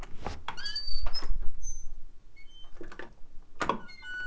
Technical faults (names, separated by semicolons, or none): clock drift between sender and receiver; repeated timing corrections